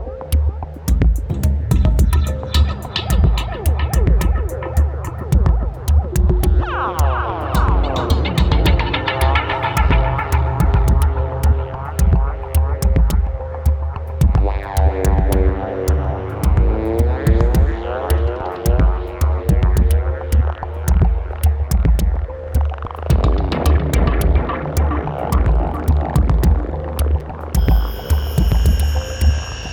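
At 27.20 s there is a repeated buffer: fresh audio failed to reach the output in time, so the last block of about 5.8 ms, which fits a 256-sample buffer, played a second time. Because the repeated piece is so short, it comes across as a single tick or brief buzz rather than a stutter. Unlike a dropout, the gap is filled with copied sound rather than silence, even though roughly 5 ms of new audio is lost.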